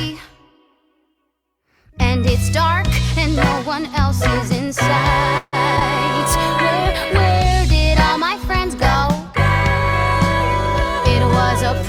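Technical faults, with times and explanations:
5.37 to 5.55 s, call audio freeze: the last sound is stretched for about 0.15 s, with 0.04 s of silence. Packets were likely held up, emptying the jitter buffer.
5.77 to 5.79 s and 5.79 to 5.82 s, short concealed packet loss: 20 ms twice goes missing. The receiver continues the preceding sound, leaving a brief smear.
6.15 to 11.86 s, call bitrate drop: the bitrate falls from 64 to 28 kbps, bottoming out for 4.4 s. The coarser coding makes the sound rougher.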